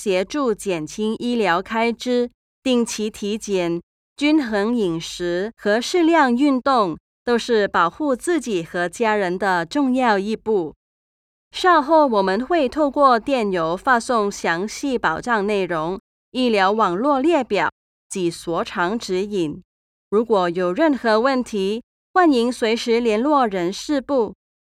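No technical fault can be heard anywhere in the audio. There is nothing to place in time order.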